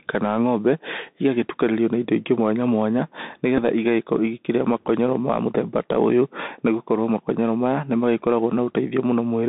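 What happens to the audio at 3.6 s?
At 3.57 to 3.59 s, right after "indo ingĩ mwanya mwanya", a Bluetooth headset packet is repeated: lost audio, about 7.5 ms, fitting two 3.75 ms packets, is filled by decoding the previous packet again. It sounds like a brief tick or buzz, and the waveform shows a short, copied stretch of cycles with a vertical smear on a spectrogram.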